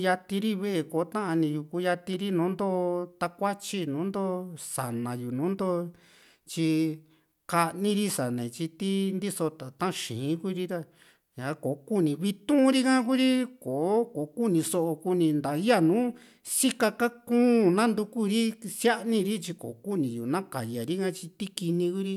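A speech recording, and nothing is technically wrong with it.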